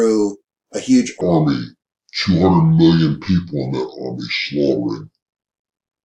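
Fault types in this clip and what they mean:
Section at the wrong speed: from 1.21 s to the end, the audio is played back at 0.675 times its original rate, most likely because a player or editor fitted it to the wrong clock. Since speed and pitch are tied together, everything after that point drags and drops by roughly seven semitones, so the sound turns deep, heavy and slowed, shifting abruptly from the correctly paced opening into this lower, stretched section.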